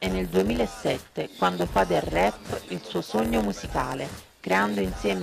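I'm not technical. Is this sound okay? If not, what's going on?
No. All the way through there is a low, steady buzz, about 92 times a second, and everything plays slightly slow, at about 0.92 of normal speed, without sounding lower in pitch. This is a block size mismatch (padded). One step hands over chunks of audio shorter than the next expects, so every chunk gets a tiny silent gap.

From 1.39 s to 2.92 s a harsh, raspy buzz at 217 Hz sits on top, steady and unrelated to the sound itself. That is GSM phone buzz. A nearby 2G phone on a call sends radio pulses that the audio equipment picks up as noise.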